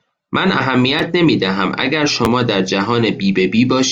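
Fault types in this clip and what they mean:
Repeated buffer: brief clicks or buzzes at 0.99 s and 2.25 s, where a 10.7 ms piece sounds twice with hard joins, which fits a 512-sample buffer. New audio arrived late, so the device replayed the last buffer.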